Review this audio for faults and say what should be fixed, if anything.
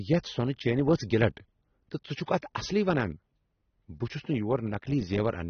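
The speech is dull and smeared throughout, with nothing above 6.3 kHz and a warbling, fizzy texture on sustained sounds and sibilants. This is likely AAC compression: AAC-LC starved of bits, consistent with about 24 kbps. Unlike a plain low-pass filter, it also warbles. Encode at a higher bitrate or keep a lossless master.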